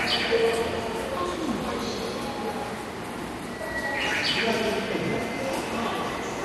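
An everyday sound recording with MP2 compression damage throughout: nothing above 12.2 kHz, flickering upper sub-bands, and gurgling, granular quantisation, likely from Layer II coding at about 64 kbps.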